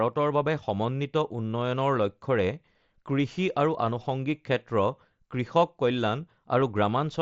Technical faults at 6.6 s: concealed Bluetooth headset packet loss

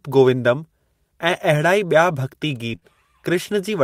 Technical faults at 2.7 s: lost packet rebuilt from error correction; short concealed packet loss

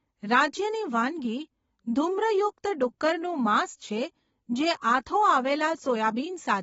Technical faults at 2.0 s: AAC compression

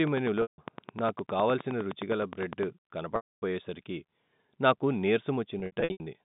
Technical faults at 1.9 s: train of clicks

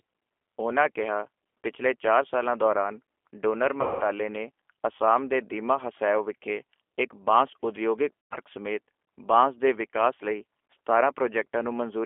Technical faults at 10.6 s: G.729 codec

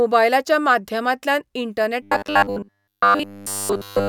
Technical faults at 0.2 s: none

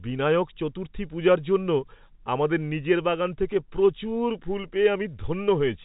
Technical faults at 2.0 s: none

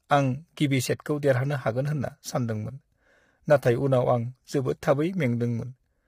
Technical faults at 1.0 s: low-delay AAC compression; pre-echo

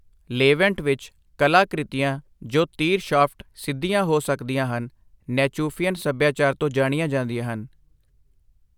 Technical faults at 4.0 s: none

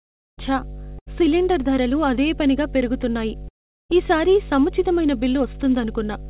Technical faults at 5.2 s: mains hum

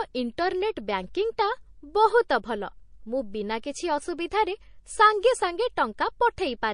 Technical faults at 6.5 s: MP3 compression

